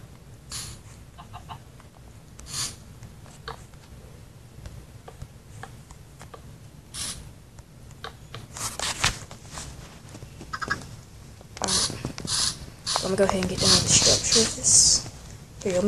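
No technical faults can be heard anywhere in the recording; the signal stays steady and intact throughout.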